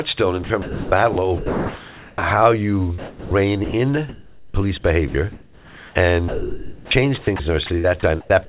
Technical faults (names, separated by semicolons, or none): sound chopped by the voice detector